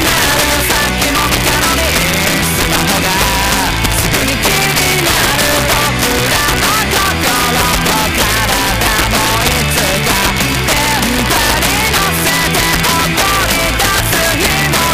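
Integer overflow runs through the whole clip: gain pushed the signal about 2 dB past full scale, so roughly three percent of samples wrapped to the opposite sign instead of limiting. Loud peaks become violent cracks, seen as full-range vertical jumps on the waveform and broadband spikes on a spectrogram.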